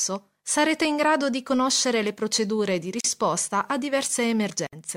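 At 3.00 s the sound drops out for about 39 ms and picks up again at 3.04 s, a classic gap at a join of encoded pieces. It looks like two separately encoded chunks were butted together without trimming, so the encoder's start-up delay and the padded final frame both survived as dead air. You hear a brief hole with smeared edges, and then the audio resumes exactly where it left off.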